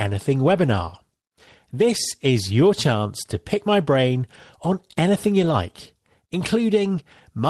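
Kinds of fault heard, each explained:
Lost packet rebuilt from error correction: at 5.41 to 5.51 s, just after "my brain on anything", the speech turns briefly rougher and noisier with no dropout. Packets were lost, and the decoder filled the hole with the low-bitrate backup copies that Opus carries inside each following packet. About 60 ms of rebuilt audio, consistent with three lost packets, plays in place of the originals, so the sound continues without a gap but at lower quality.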